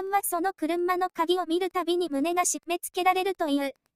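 Wi-Fi interference runs the whole way through: a nearby radio's 102.4 ms beacon gets rectified, giving faint ticking about ten times a second, roughly 45 dB down.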